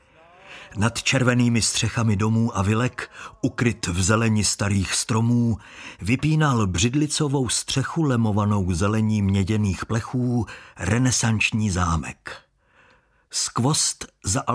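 Listening through the recording, nothing stood out as a technical problem at any point.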